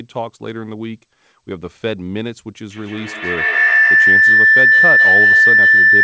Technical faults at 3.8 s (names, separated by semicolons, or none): feedback howl